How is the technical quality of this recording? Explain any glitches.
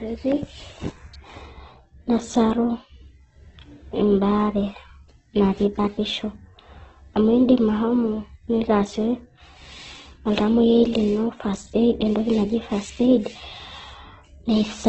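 The recording has clear technical damage: coarse, band-limited speech throughout and one brief electrical spike near the start.

Throughout, the speech sounds grainy, rough and noisy, with nothing above about 8.2 kHz; this is likely heavy Opus compression, filling starved bands with folded or noise content, fitting roughly 12 kbps.

At 1.14 s a sharp snap or tight cluster of clicks sits on top of the speech, likely an electrical switching spike, a brief nearby arc picked up by the audio line.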